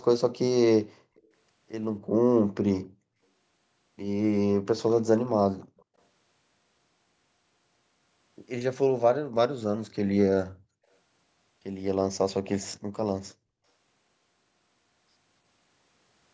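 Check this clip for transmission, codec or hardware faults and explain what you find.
Two kinds of fault appear in this speech recording: a faint echo leak and a brief dip in the background caused by the echo canceller.

Between 1.16 and 1.28 s, and again from 5.77 to 5.83 s, a faint delayed copy of the speech sits under the talker, trailing by 276 ms and some 35 dB below it, so it registers as a ghostly shadow. This is likely an echo leak: the far end's loudspeaker output reached its microphone, and its echo canceller failed to strip all of it before sending it back.

At 9.25 to 9.36 s the room tone suddenly falls away by about 40 dB for roughly a tenth of a second, then snaps back, leaving a small hole of near-silence. This is background gated by the echo canceller: while the loudspeaker was active, the canceller clamped the microphone down hard and released it once playback stopped. 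The call's microphone processing, with content reaching up to 8 kHz, is working as expected.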